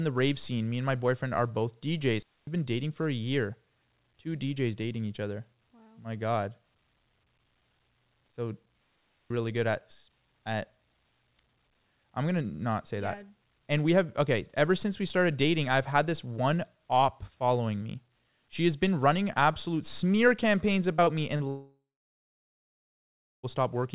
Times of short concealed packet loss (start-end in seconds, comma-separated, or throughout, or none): 20.96-21.10, 21.37-21.43